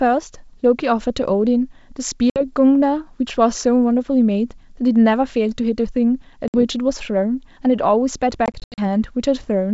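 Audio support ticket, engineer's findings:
Packet loss on the ADPCM call (G.722 path). Dropped packets were filled with silence, so the decoder's adaptive predictor and step size lost sync with the sender's.

2.30–2.41 s: hard-edged gap of about 60 ms, a few packets' worth. Speech resumes with brief distortion.

6.48–6.55 s: same pattern, about 60 ms lost, then slight distortion that settles within tens of milliseconds.

8.46–8.80 s: scattered dropouts totalling about 180 ms over 320 ms, longest 80 ms, around ten packets. Repeated holes, each followed by a mistracked, distorted onset.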